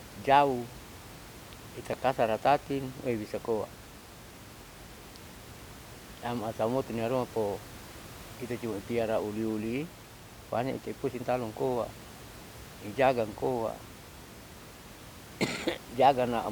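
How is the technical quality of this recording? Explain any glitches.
No technical glitches are audible.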